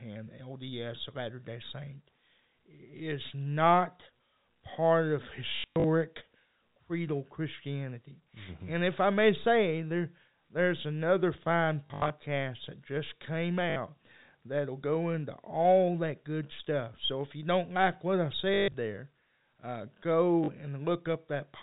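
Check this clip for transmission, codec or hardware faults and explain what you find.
The clip has one fault, packet loss with the last packet repeated, occurring five times. Each time it sounds like a short robotic stutter, with a buzz near 50 Hz during longer runs:

5.56 to 5.84 s, after "is not part of"
11.86 to 12.1 s, between "there there's another fine" and "that just came"
13.7 s
18.54 to 18.74 s, with the longest run, about 140 ms
20.44 s, after "there uh"

Lost packets were filled by replaying the previous one, which fits 20 ms packets. The loops seldom line up with the pitch.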